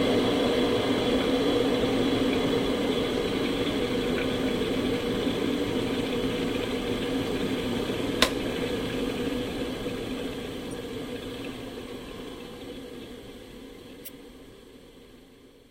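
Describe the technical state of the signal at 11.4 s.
At 11.4 s the signal is intact, with no audible fault at that moment.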